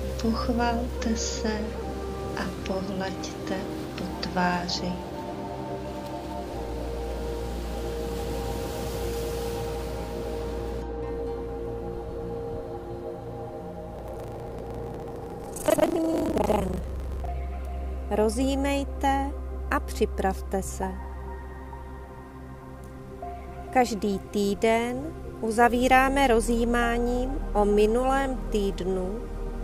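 Buffer tearing runs from 13.92 to 17.31 s, a rattling 25 Hz buzz where roughly half of each period replays audio from around a tenth of a second earlier.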